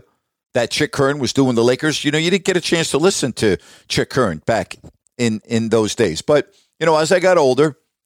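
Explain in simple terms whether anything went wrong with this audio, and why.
At 6.04 to 6.06 s, just after "back in in those", a single loud pop cuts in, much louder than the speech, which carries on underneath. It is likely a sudden electrical jolt, such as a plug, switch or static discharge, added to the recording.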